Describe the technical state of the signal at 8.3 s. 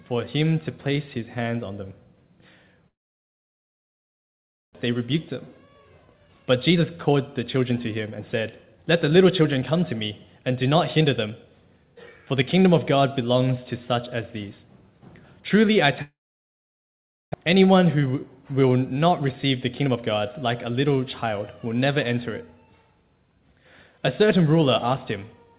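At 8.3 s the audio is inside a jitter buffer speed-up that runs from 7.57 to 11.44 s. The receiver's buffer had built up more audio than its target, so it cut out short pitch-period-length segments over and over to drain the excess. About half a second is removed across the span, so the sound plays roughly 14% fast at unchanged pitch and comes across as hurried, all within the 4 kHz band of the call path.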